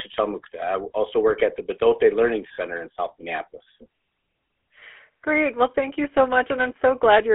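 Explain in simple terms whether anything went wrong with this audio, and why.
The whole clip has gone through the GSM full-rate codec, the old mobile phone speech coder. It doesn't store the actual waveform. It keeps a rough model of how the throat and mouth shape the sound, then rebuilds the speech from a thinned-out buzz. That gives the voice a plainly audible gravelly, buzzy edge. The phone line around it also cuts everything below about 250 Hz and above 3.4 kHz, so the speech sounds thin and boxed in.

There are also two short glitches from lost GSM frames, at 2.54 to 2.59 s and at 4.80 to 4.83 s. When a chunk of coded speech goes missing, the decoder just reuses the last good chunk, turning it down if more chunks go missing. So instead of a gap you hear a brief metallic, ringing smear. The first one lasts about 40 ms, which fits two dropped frames. The second is shorter and fits a single lost frame.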